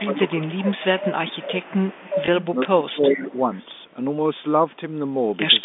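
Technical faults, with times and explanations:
0.00–1.82 s and 2.57–3.50 s, speech suppressed in double talk: the echo canceller likely mistook overlapping talk for echo, ducking the voice by about 15 dB, then about 25 dB.
0.14–2.45 s and 2.91–3.65 s, echo leak: a loudspeaker echo likely slipped past the canceller, returning a copy 363 ms late, about 10 dB then about 15 dB below the voice.
2.26 s, packet loss with last packet repeated: one 20 ms packet went missing and the previous one was replayed, leaving a small blip at the join.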